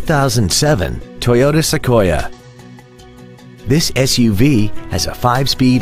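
No technical faults can be heard anywhere in the audio, and the signal stays steady and intact throughout.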